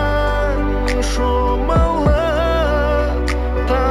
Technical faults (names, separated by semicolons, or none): imaging from linear upsampling